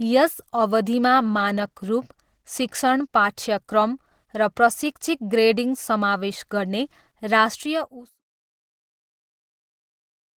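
A speech recording carries plainly audible Opus compression damage from start to finish. The voice sounds hoarse and muffled, with grainy, rough texture. The likely cause is an Opus encoder starved of bits, which fits a rate near 16 kbps. At that rate it switches to its hybrid speech mode and fills thin bands with noise. Bandwidth stays full, reaching about 20.2 kHz. The intended fade-out, from about 7.5 s to 8.22 s, carries the same texture.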